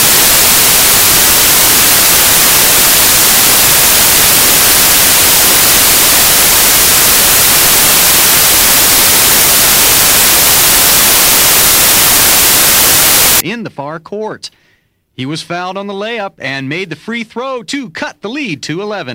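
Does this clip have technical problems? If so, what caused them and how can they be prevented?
Yes. Samples built from the wrong bytes run from 0.0 to 13.4 s: the reader assembled each sample's bytes incorrectly, through a one-byte offset, swapped byte order or wrong alignment. The rapidly changing low-order bits land in the high-order position, so the audio turns into loud, harsh broadband noise, close to white on loud passages, and the problem stops at 13.4 s. Prevention: declare and verify byte order, sample width and alignment wherever audio is read or converted.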